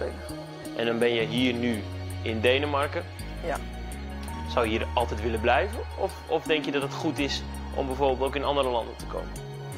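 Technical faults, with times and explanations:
0.63 to 0.65 s, lost LE Audio frames: About 20 ms of Bluetooth LE Audio data never reached the decoder, which fits two consecutive 10 ms frames going missing. The LC3 decoder filled the gap by repeating the last good spectrum with its phases randomised by flipped signs. The sound keeps its rough level and spectral shape for that instant, but any tonal content turns into a brief, noisy smear before normal decoding resumes.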